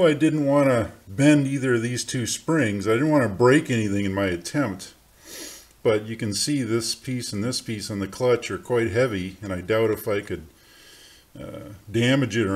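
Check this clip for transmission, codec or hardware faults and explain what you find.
No transmission, codec or hardware faults can be heard in the clip. Nothing in the signal points to a problem anywhere along the chain that carried it.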